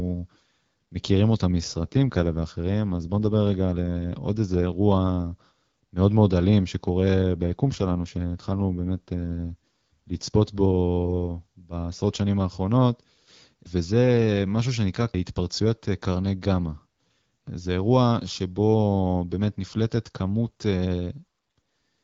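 Speech, carried over an AMR-WB wideband call whose normal rate sounds like 12.65 kbit/s. Two AMR rate drops occur, from 1.55 to 4.67 s and from 7.14 to 10.24 s. The voice turns rougher and more synthetic, which points to a fall to about 8.85 kbit/s. The band stays unchanged and nothing drops out.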